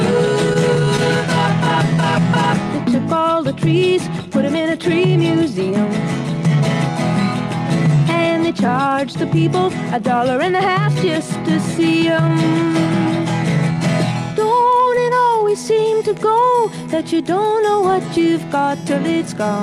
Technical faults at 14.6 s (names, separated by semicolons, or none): clock drift between sender and receiver; repeated timing corrections